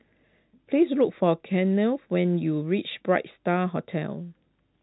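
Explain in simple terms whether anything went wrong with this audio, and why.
Nothing went wrong here: the speech has the narrow, phone-line sound of G.711 telephone coding, which keeps nothing above 3.9 kHz, and that is simply how an ordinary landline call is meant to sound.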